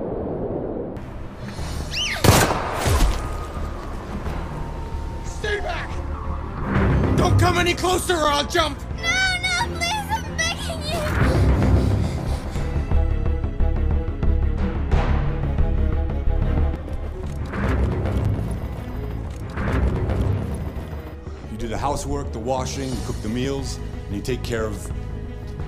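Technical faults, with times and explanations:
8.24 s and 18.25 s: gap between chunks. The audio stops dead for about 7 ms at each point, then resumes. These are two joins in a stream delivered in 10-second chunks, and the timing matches that spacing. No sound is lost. The playback simply pauses between pieces, which fits padding at each chunk boundary or a late start for the next one. Each silence is heard as a brief dropout.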